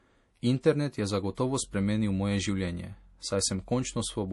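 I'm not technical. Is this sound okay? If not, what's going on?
No. Heavy MP3 compression likely squeezed this speech too hard, cutting everything above 11.4 kHz and leaving a dull, watery, swirly sound from start to finish.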